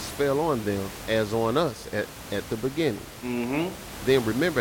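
No technical faults in this recording.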